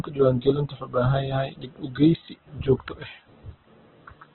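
Throughout the speech, heavy damage from likely Opus compression at a very low bitrate, around 8 kbps: nothing survives above 4.2 kHz, so the sound is narrowband, muffled and grainy. A spectrogram shows a hard ceiling with noisy, smeared energy beneath it.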